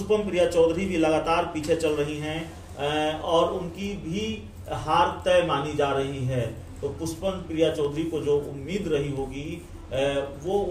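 Nothing goes wrong anywhere in this clip, so there's no fault to point to at any moment.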